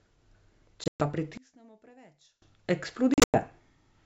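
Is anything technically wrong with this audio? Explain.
Yes. The speech has two kinds of fault, with a wideband telephone path, G.722 at 64 kbit/s, carrying it.

From 0.84 to 1.02 s and again from 3.14 to 3.39 s the sound drops out in hard-edged gaps, then comes back slightly distorted before it settles. This is packet loss on an ADPCM call. About 140 ms is lost across 160 ms in the first event, around seven packets, with a longest run of 120 ms. The second loses 160 ms across 200 ms, with a longest run of 100 ms. Silence fills each hole. Because ADPCM codes only the change from a predicted value, the receiver's predictor and step size drift away from the sender's, so the returning audio takes some tens of milliseconds to recover.

Between 1.38 and 2.42 s the speech suddenly falls away by about 28 dB, leaving only a faint residue. The likely cause is one channel inverted. With one stereo channel's polarity reversed, the material shared by both channels cancels when they are summed to mono, and only their small differences remain audible.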